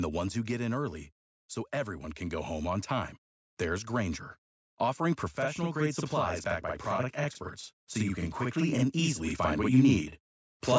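From 5.35 s to the end, one channel runs late by 46.44 ms, which fits a 2048-sample buffer, and the two channels are summed to mono. This channel delay (doubling) makes the speech sound doubled, with an equally loud slap echo trailing each syllable.

From 7.95 s to 10.1 s, automatic gain rising occurs: the gain control judged the input too quiet and raised its gain by about 5 dB. Speech and background swell together gradually, while the call microphone processing still leaves nothing above 8 kHz.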